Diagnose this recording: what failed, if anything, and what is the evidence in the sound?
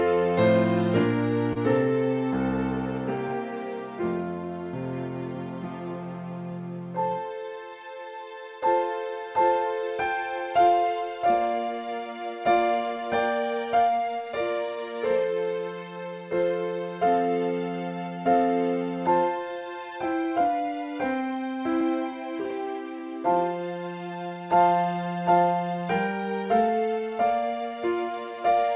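Clock drift between sender and receiver, at the call's buffer stage: the sending clock runs slightly slow, by roughly one and a half percent. The receiver's jitter buffer keeps draining, so small timing hiccups recur unevenly through the whole clip over the band-limited, under-4 kHz call sound.

A short stall from a late packet, at the network and jitter buffer: between 1.53 and 1.58 s a packet arrived late, the buffer ran empty, and the receiver held the last sound for 26 ms. Nothing is lost, but that moment is audibly stretched, with a slight buzz or dip.

Repeated timing corrections, in the receiver's call processing: from 3.28 to 28.29 s it keeps repeating small pieces to keep pace with the slow sender. The audio plays at about 98% speed and gains about half a second overall.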